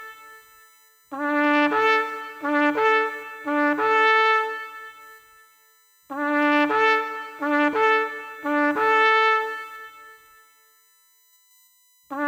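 Right from the start and running the whole way through, there's a USB whine: a steady, fixed-pitch tone sitting on 1 kHz, with its harmonics stacking up so the strongest component lands way up at 14 kHz. That's current drawn in the bus's 1 ms frames leaking into the audio through the power or ground. It's faint, roughly 35 dB under the sound.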